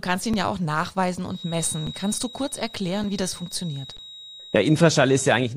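At 0.33 s, just before "ja auch nachweisen", the speech briefly freezes on a flat level for about 3 ms and resumes. The same underrun with held sample recurs at 1.87 s, 3.04 s and 3.97 s, lasting about 5 ms, 5 ms and 17 ms. Each time the output buffer ran dry and the converter held its last value. The 5 ms gaps fit a 256-sample buffer. Live audio was lost during each hold.

From 1.24 s, right after "ihn ja auch nachweisen", a thin steady whistle near 3.8 kHz sits behind the speech until the end, swelling and fading slowly and about 20 dB below it. This feedback whistle likely comes from a loudspeaker-to-microphone loop hovering at the edge of feedback, so one high frequency rings on without building into a howl.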